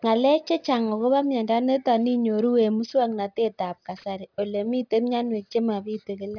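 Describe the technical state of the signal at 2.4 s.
At 2.4 s, as across the whole clip, aliasing is present: content above about 5.5 kHz folds back, leaving gritty sibilants, consistent with resampling to 11 kHz, and mirrored spectrogram traces running hard to the band edge.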